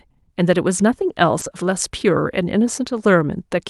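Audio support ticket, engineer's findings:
Short concealed packet loss, 1.39–1.43 s: roughly 20 ms of packet data missed the jitter buffer deadline; decoder concealment extended the preceding sound, then crossfaded back into received audio. Audible as a brief smear or wobble, on a call path whose top end stops near 12 kHz.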